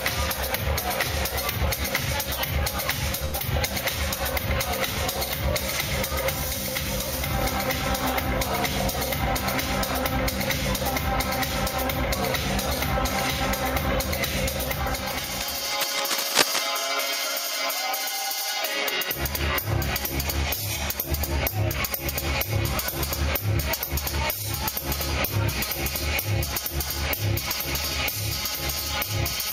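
At 3.25 to 3.35 s there is a short stall from a late packet. A packet arrived late. The last sound is held about 80 ms, with nothing lost.

At 3.39 to 3.43 s comes a skip ahead. Roughly 70 ms of audio is dropped. Playback jumps forward, with the two sides joined almost directly.

From 9.38 to 12.16 s a jitter buffer speed-up runs. Short pitch-period pieces, about 70 ms in total, are cut. The audio plays 3% faster at unchanged pitch.

From 15.37 to 16.72 s there is cable scratch noise. Dense, uneven scratching bursts sit over the sound, roughly as loud as it. A worn cable or connector being moved is the likely cause.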